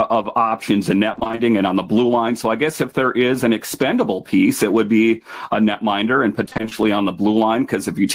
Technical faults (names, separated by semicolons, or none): gain pumping; repeated packet loss (robotic sound)